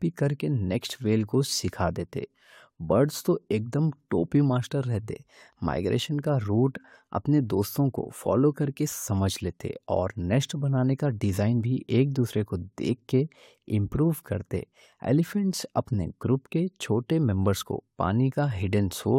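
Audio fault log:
No technical faults were found in the signal, which holds steady across the whole speech recording.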